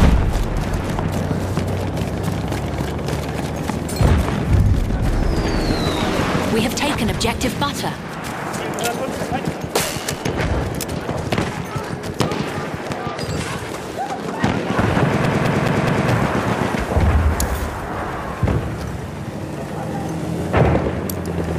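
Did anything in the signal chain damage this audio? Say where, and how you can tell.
Yes: a CD stuck on one turn, from 15.26 to 16.10 s, at the playback stage. The same 0.21 s slice repeats four times with a brief mute at each jump, because a scratch keeps knocking the laser back one track per revolution.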